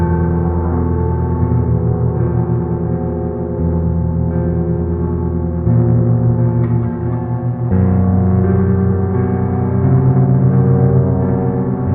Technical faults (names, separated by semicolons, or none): AAC frame loss with concealment